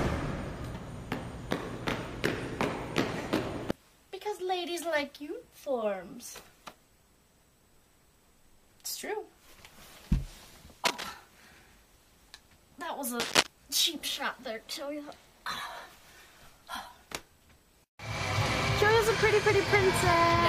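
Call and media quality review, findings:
Cable scratch noise, 10.85–11.13 s and 13.20–13.47 s: brief dense scratchy rustle over the audio, first about level with the signal, second somewhat louder. Likely a worn cable, connector or control being moved, its contact resistance fluctuating rapidly.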